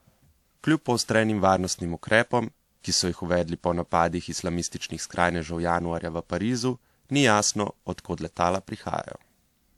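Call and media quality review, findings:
Throughout the speech: swirly, smeared, hollow tone, consonant attacks blurred, worse than a single lossy pass would leave. Likely generation loss: about three decode/re-encode passes, each requantising on a shifted frame grid so artefacts stack. Sound fits a 96 kbit/s WMA chain.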